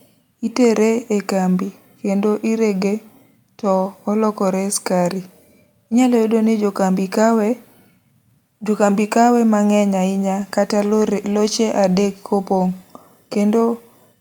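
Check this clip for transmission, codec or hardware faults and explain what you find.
Listening through the recording, nothing stood out as a fault of any sort.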